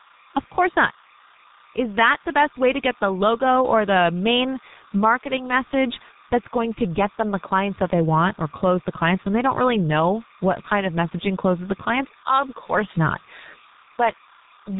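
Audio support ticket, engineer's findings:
Timecode bleed, whole clip: steady chirping warble behind speech, about 30 dB down. Likely LTC crosstalk from an adjacent track or cable. Spectrogram shows constant bands near 1 and 2 kHz, with a rhythm fitting 29.97 fps code.

G.723.1 codec, whole clip: muffled, hoarse speech with smeared consonants. Heavy low-rate telephony coding, fitting a 6.3 kbit/s mode. Spectrogram shows a hard ceiling at 3.8 kHz and coarse, blocky formants from slow 30 ms frame updates.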